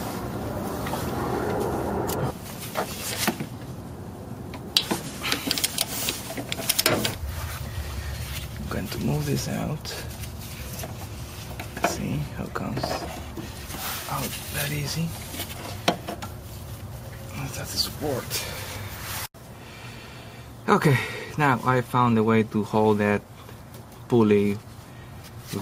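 No technical faults are audible.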